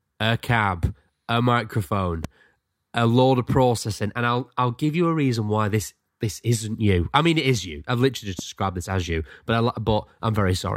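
Speech, with two sharp loud pops over it: 2.24–2.27 s after "a cab a microphone", and a softer one at 8.39–8.41 s before "described this as you", likely brief voltage spikes.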